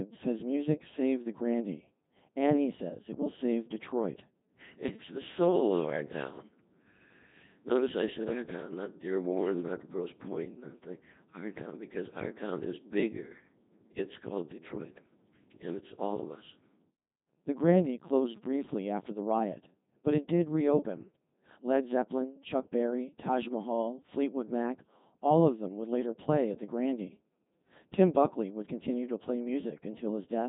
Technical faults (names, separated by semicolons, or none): Codec 2 vocoder